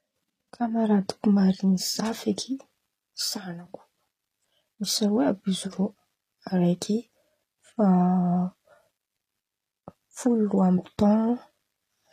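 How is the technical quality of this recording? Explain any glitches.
The recording has one glitch, and it runs the whole way through. The treble sounds like HE-AAC compression is the likely cause. Top end gets rebuilt by copying lower bands upward, so sibilants turn gritty and lispy, nothing sits above 14.9 kHz, and the damage suggests a low bitrate around 24 kbps.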